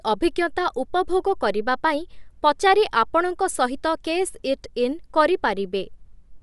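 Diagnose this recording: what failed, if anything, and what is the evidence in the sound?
The codec stage failed. Across the whole recording, the speech has a breathy, grainy edge. Nothing is heard above 11.5 kHz, so the top of the band is missing. This points to Bluetooth LC3 compression as the likely cause. The transform codec works in short frames, and the texture fits 10 ms framing at around 48 kbps. At that rate it drops upper-spectrum detail and fills gaps with shaped noise. The damage is plainly audible.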